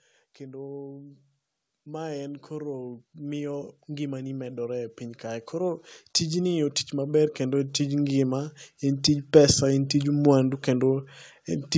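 From 0.38 s to 9.62 s there's automatic gain rising: the gain control decided the input was too quiet and crept up about 18 dB, so voice and background swell together slowly.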